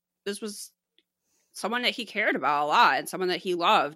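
No technical faults can be heard in this speech recording.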